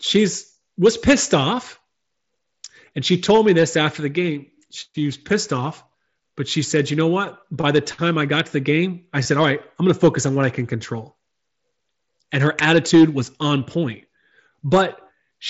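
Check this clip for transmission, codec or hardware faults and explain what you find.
One transmission fault is audible in this speech clip: a short burst of concealed Bluetooth headset packet loss. It comes through the wideband mSBC headset codec, which carries the speech up to 8 kHz with light grain.

Concealed Bluetooth headset packet loss occurs from 9.23 to 9.25 s. About 22.5 ms of audio never arrived from the headset, which fits roughly three lost packets in a row. The phone filled the gap by repeating the closest-matching recent cycle of the waveform. Because the run is short, it sounds like a brief buzzy, held tone at full level, followed by a slight warble as the real audio resumes.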